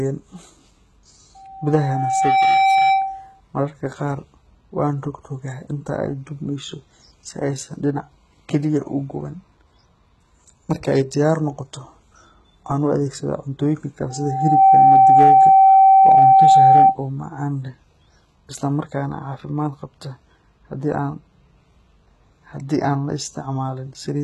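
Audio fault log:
Throughout: HE-AAC compression, likely. The speech has nothing above 11.8 kHz, and the upper band sounds synthetic: s sounds come out gritty and lispy. That fits heavy coding at a low bitrate of about 16 kbps, where treble is copied up from lower bands instead of being carried.
1.35–3.41 s and 14.09–16.98 s: loudspeaker feedback squeal. A steady 774 Hz tone swells over the speech as the mic re-amplifies its own speaker output. The first builds over roughly a second to about 10 dB above the speech. The second climbs in about half a second to around 15 dB and dies just before "oo macaan leh".
14.75–15.47 s and 16.07–16.85 s: hard clipping. Peaks are overdriven by about 2 dB and get flattened, which adds crackle on the peaks. Both stretches sit inside the second squeal. The second one ends right before "oo macaan leh".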